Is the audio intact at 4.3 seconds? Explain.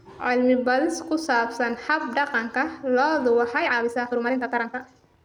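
No. At 4.3 seconds the speech sits inside a time-stretched section that runs from 3.49 s to the end at 5.25 s, sped up about 1.7 times. The pace jumps abruptly while the pitch stays put, so the speech sounds rushed. That fits software that likely squeezed the audio by dropping short pieces. On a spectrogram, syllable patterns crowd together with harmonics at unchanged heights, and the waveform shows shortened events with small splice discontinuities.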